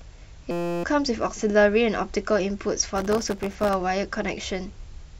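It's a speech clip with two separate problems. From 0.51 to 0.84 s there's a system hang loop: the machine or driver stalled while the audio hardware kept replaying one 5.8 ms slice, which fits a 256-sample buffer. That slice repeats 56 times, so you hear a steady buzz at 172 Hz instead of the talker, and about a third of a second of real audio is gone. Then from 2.96 to 3.74 s there's processor overload crackle. The CPU falls behind and keeps missing its deadlines for very short buffers, under a millisecond each, and something like a hundred of them come out as tiny hard-edged dropouts to silence. Stacked together, those gaps turn into a gritty, tearing crackle over the speech that stops once the load eases.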